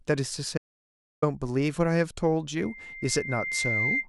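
From 0.58 s to 1.22 s the speech stops dead and picks up again mid-flow, with about 0.65 s of silence between and no room tone underneath. This is an audio dropout to silence. The likely cause is that the input signal was briefly lost, through a disconnected device, a failed link or an accidental mute, while the recorder kept writing silence. Whatever was said during that gap is missing.

At 2.59 s a thin, steady tone at 2.1 kHz appears. Over roughly a second it grows into a piercing squeal that sits at about the same level as the speech, and it continues until 4.07 s. This is loudspeaker feedback squeal. The microphone was picking up a loudspeaker it was feeding, and at 2.1 kHz the round-trip gain exceeded one, so that frequency kept reinforcing itself.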